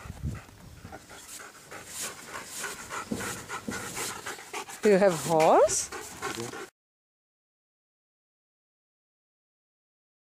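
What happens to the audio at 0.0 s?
Nothing goes wrong at 0.0 s; the audio is intact there.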